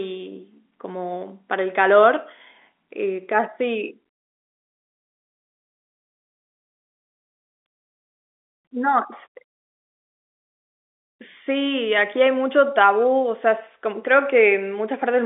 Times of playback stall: none

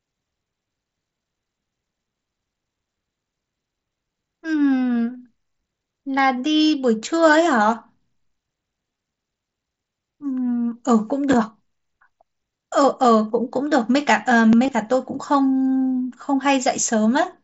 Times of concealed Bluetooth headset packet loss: 5.14, 6.57-6.60, 8.91-8.98, 14.64-14.71, 15.96

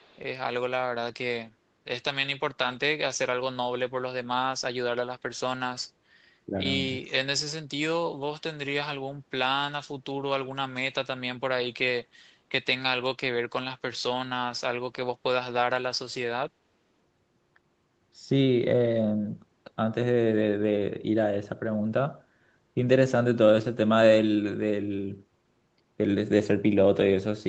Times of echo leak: 0.00-0.19, 7.06-7.13

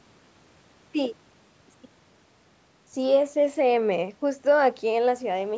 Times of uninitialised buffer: none

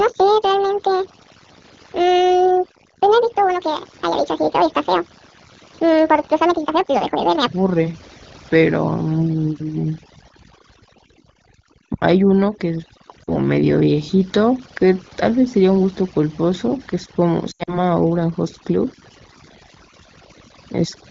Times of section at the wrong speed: 0.00-7.47

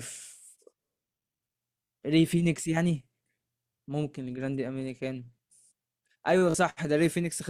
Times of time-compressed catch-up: none

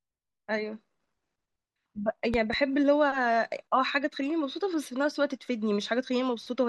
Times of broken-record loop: none

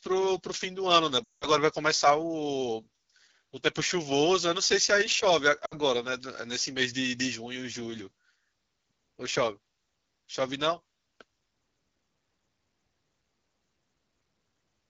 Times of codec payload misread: none

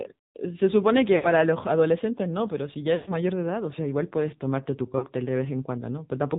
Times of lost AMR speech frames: 1.16-1.27, 2.96-3.14, 4.98-5.07

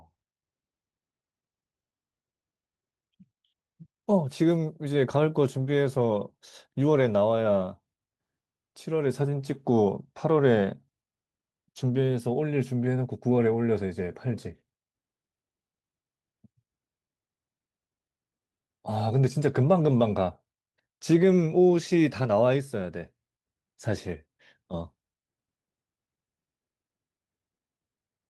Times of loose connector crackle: none

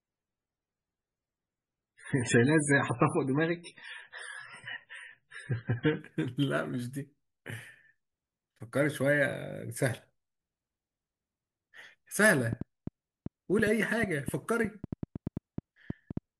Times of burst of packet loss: none

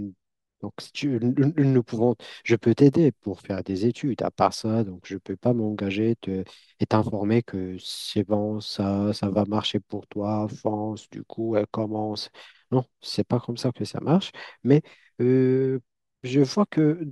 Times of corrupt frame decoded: none

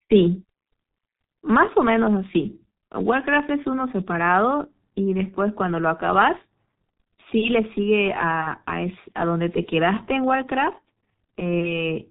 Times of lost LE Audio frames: none

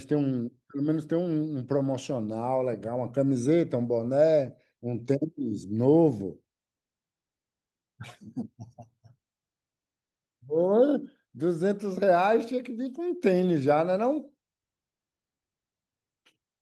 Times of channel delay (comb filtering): none

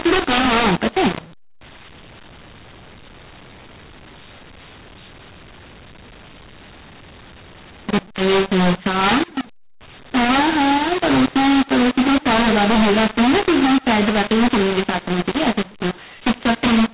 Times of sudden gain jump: none

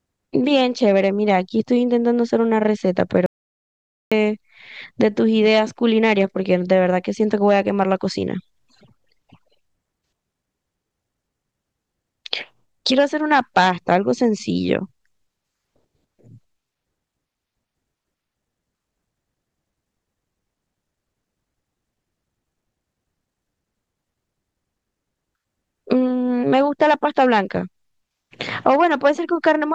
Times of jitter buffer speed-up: none

